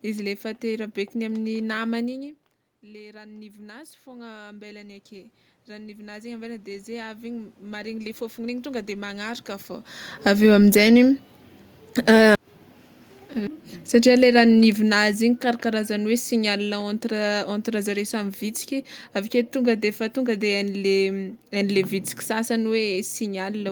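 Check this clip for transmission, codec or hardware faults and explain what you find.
The faults here are level changes from automatic gain control, in two directions.

Automatic gain rising, from 0.42 s to 12.5 s: the speech and the room noise behind it swell together, climbing by about 12 dB over roughly twelve seconds. Because the background rises in step with the voice, this is the gain control judging the input too quiet and slowly turning itself up. The talker's own shifts in distance, around 2 s and 9.5 s, sit inside this rise but change only the voice.

Automatic gain falling, from 10.11 s to 12.25 s and again from 13.83 s to 17.95 s: the level sinks, by about 4 dB in the first stretch and about 6 dB in the second, with the room noise dropping along with the speech. The gain control has judged the input too loud and is pulling its gain back. The first dip overlaps the end of the long rise.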